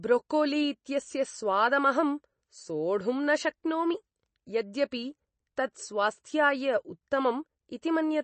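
From start to end, nothing is heard above 8.3 kHz, and a watery, swirling texture runs through the speech, likely from MP3 compression at a low bitrate near 32 kbps. That shifting texture, not just the dull top end, separates it from simple low-pass filtering.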